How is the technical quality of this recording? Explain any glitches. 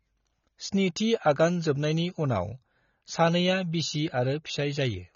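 The quality is poor. AAC compression damage runs throughout the speech. Nothing reaches above 6.9 kHz, so it sounds dull. Sibilants fizz and smear, which fits a low bitrate around 24 kbps, likely from AAC-LC coding discarding high bands.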